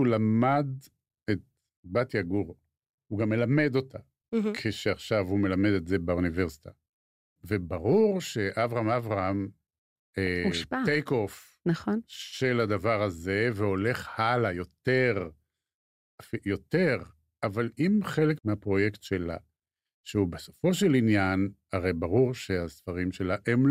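At about 10.27 s the speech breaks into a brief DAB burbling patch. Bit errors slipped past error correction into the MP2 data, which points to a few corrupted frames, and wrong samples put short blips of noise into single sub-bands. On a spectrogram it appears as isolated bright horizontal blocks.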